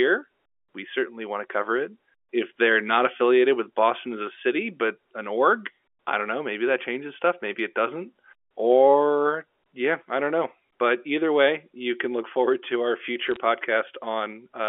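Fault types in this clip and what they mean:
Bit errors on a digital phone line: a short burst of sharp ticks and crackle from 13.27 to 13.36 s, just after "look forward to our". Flipped bits on the G.711 line each corrupt one sample, and hits on high bits or on the sign of loud samples throw it far off, producing clicks.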